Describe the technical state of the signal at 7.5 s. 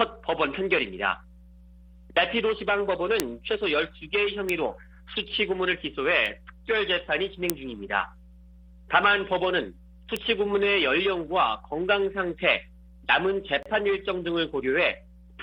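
A single sharp, broadband tick at 7.50 s is a bit error spike: a flipped bit briefly throws a few consecutive sample values off by a power of two before they snap back.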